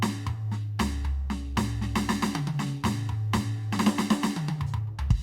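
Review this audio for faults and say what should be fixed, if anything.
No faults found; nothing in this music needs fixing.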